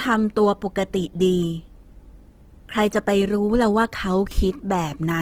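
Throughout, the speech is grainy and rough, not swirly like MP3, because starved bands are noise-filled; likely Opus compression, fitting about 16 kbps.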